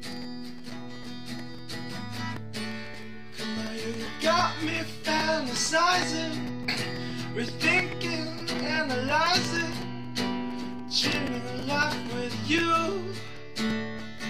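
No technical faults can be heard anywhere in the audio, and the signal stays steady and intact throughout.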